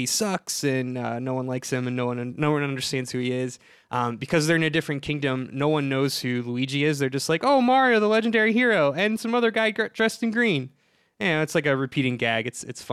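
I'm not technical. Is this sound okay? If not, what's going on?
Yes, nothing in this speech recording points to a technical fault.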